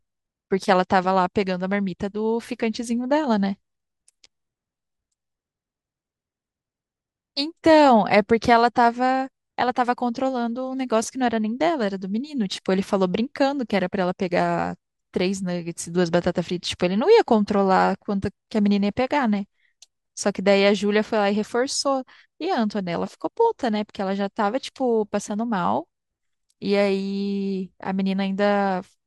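No technical faults can be heard anywhere here.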